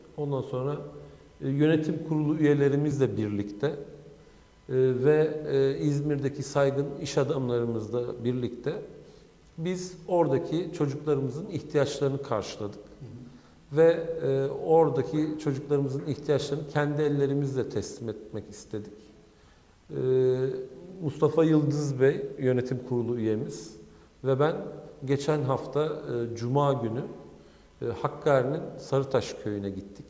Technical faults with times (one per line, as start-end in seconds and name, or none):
none